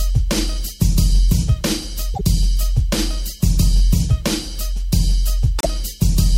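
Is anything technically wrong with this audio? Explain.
Yes. A likely broken MP3 bit reservoir causes two glitches, at 2.13 to 2.21 s and 5.58 to 5.66 s. Each time the sound skips ahead and turns garbled for about 80 ms, roughly three 26.1 ms frames, because the frames after a cut look back for borrowed data and read bytes from the wrong frame.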